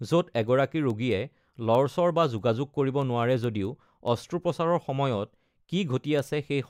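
From 0.27 s to 6.61 s the speech carries word clock ticks: around thirty sharp, uneven clicks at a steady spacing of about a fifth of a second. The receiving device was running on its own clock, roughly 100 ppm away from the sender's, so each time the two slipped a single sample was dropped or repeated. Random dropouts or crackle land irregularly. These ticks keep a metronome-like regularity.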